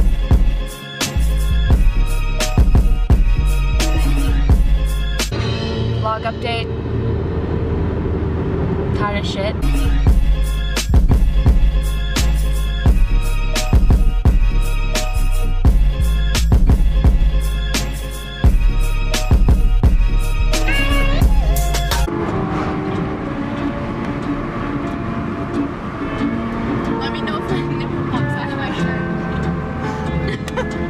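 No technical faults can be heard at any point in the recording.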